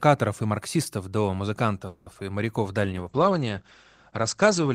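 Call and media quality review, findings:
Call audio freeze, 1.87–2.07 s: sound stretches into a fading buzz for about 190 ms without reaching silence, then resumes intact. Likely jitter buffer underrun from delayed packets. Unlike loss, nothing skipped, so playout runs about 190 ms later afterwards.

Short concealed packet loss, 2.13–2.24 s: brief smear where about 20 ms never arrived. Decoder concealment extrapolated the last sound, then crossfaded back. Timing shifts only slightly, about 10 ms, versus the freeze's long gap and full recovery.

Call bitrate drop, 2.84 s to end: encoder rate falls from 40 to 14 kbps, bottoming out for about 1.85 s. Bandwidth shrinks from 20 kHz to 8 kHz, so the sound turns muffled and rough. Unlike loss, the degradation is continuous rather than a momentary glitch.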